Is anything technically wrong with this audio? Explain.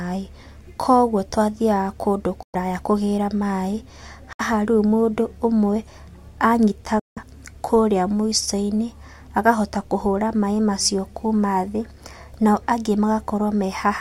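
Yes. The speech is interrupted three times by silent gaps, most likely Bluetooth dropouts: 2.43 to 2.55 s, 4.33 to 4.41 s, and 6.99 to 7.18 s. Late packets were discarded, muting the output, and the speech resumes further along as though it had kept playing.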